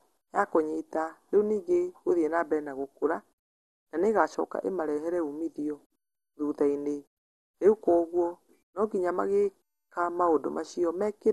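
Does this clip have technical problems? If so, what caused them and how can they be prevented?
Yes. Throughout the speech the sound is dull, with a gurgling, granular roughness, likely from MP2 compression at a bitrate that points to about 64 kbps, where starved upper sub-bands switch off. A spectrogram shows nothing above 12.2 kHz and patchy, flickering bands below. Encoding at a higher bitrate or with a more efficient codec would prevent this.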